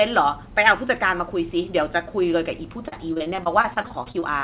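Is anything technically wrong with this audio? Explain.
Yes. Repeated packet loss (robotic sound) runs from 2.88 to 4.24 s: more than a dozen short dropouts, the longest about 37 ms, are each patched by extending the preceding sound, so roughly a fifth of that stretch is filler. The speech turns choppy and robotic, with pieces missing, over the band-limited G.711 call sound that stops at 4 kHz.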